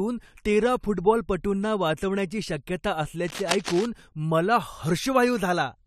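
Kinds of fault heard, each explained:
Cable scratch noise: 3.28–3.86 s, after "तेरा फुटबॉलपटूंना वाचवण्याची शक्यता", uneven scratching bursts about 10 dB below the speech, likely a worn connector whose contact resistance jumps as it moves.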